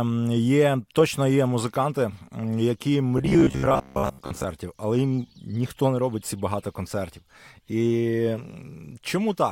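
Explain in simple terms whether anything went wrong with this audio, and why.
From 3.18 to 4.44 seconds the speech turns into a stiff, metallic buzz near 67 Hz that only loosely follows the words. This is robotic sound from repeated short buffers, likely caused by audio arriving too slowly, so each tiny chunk of about 15 ms was replayed over and over instead of fresh sound.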